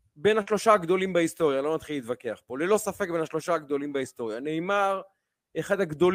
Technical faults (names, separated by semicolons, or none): none